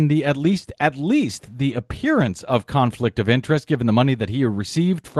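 No technical faults are audible.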